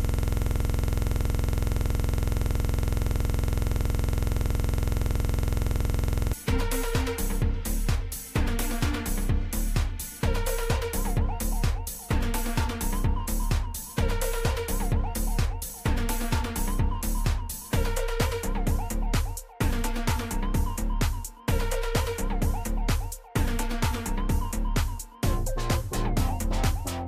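From the very start until 6.33 s, a system hang loop: the system stalled while the output kept replaying one 46.44 ms stretch of its ring buffer, which fits a 2048-sample buffer. The same fragment repeats well over a hundred times, producing a rough 21.5 Hz buzz-like stutter.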